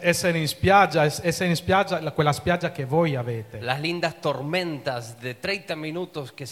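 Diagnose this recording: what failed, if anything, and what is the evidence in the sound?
A sudden voltage step, most likely from a plug, switch or static discharge in the analogue wiring, was added to the signal. The result is a loud pop near the end, between 5.45 and 5.53 s: two sharp pulses in quick succession, peaking at roughly 10 dB above the surrounding level. The circuitry downstream shaped each step into a short thump, and the underlying sound continues beneath the pops, unchanged.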